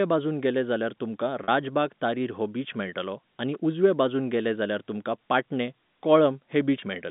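Right after "वाटेन गेले जाल्यार तुमकां", from 1.44 to 1.48 s, there's packet loss with pitch repetition. About 40 ms went missing, likely two 20 ms packets, and the repeated pitch period gives a brief held buzz before "तारीर हो बीच". At 3.54 s, just before "उजव्या वाटेन गेले जाल्यार", a sharp snap sits on top of the sound, likely an electrical switching spike from a nearby switch or discharge. From 6.80 to 6.82 s another, shorter packet loss with pitch repetition bridges roughly one packet's worth of sound, and that 20 ms gap comes through as a tiny held buzz, all over a narrowband G.711 telephone line.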